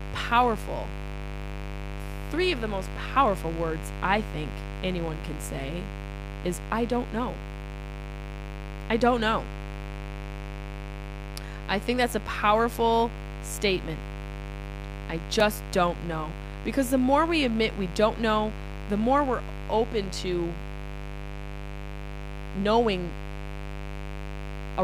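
From start to finish the speech carries mains buzz at 50 Hz, sitting roughly 10 dB below the signal. Sharp switching spikes leaked in twice per mains cycle, from a dimmer, rectifier or missing shield, spreading harmonics into the kilohertz range and giving a steady, raspy buzz.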